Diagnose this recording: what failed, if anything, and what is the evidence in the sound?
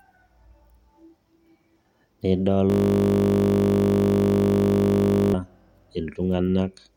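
System hang loop from 2.7 to 5.34 s, at the driver or buffer stage: the speech collapses into a steady 50 Hz buzz. The hardware kept replaying one 20 ms chunk of the ring buffer while the system froze, losing roughly three seconds of audio.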